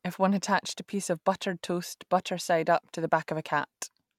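Nothing to flag: no technical faults audible in the speech.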